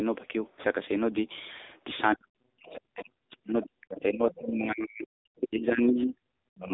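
Throughout, the speech passed through the AMR narrowband mobile codec at a low mode, near 8 kbps, so nothing above 3.8 kHz survives, and the voice sounds thin, buzzy and plainly synthetic.

From 2.15 s to the end, the talker's speech is suppressed in double talk, likely because the echo canceller cannot separate the two voices. It dips by up to roughly 40 dB across about four seconds, so the voice sinks and drops out in pieces.

At 3.97, 4.32 and 6.01 s, the other side's voice leaks through, likely from loudspeaker echo the canceller missed. These are brief scraps of a second voice, about 20 dB below the speech, and around 30 dB below at 6.01 s.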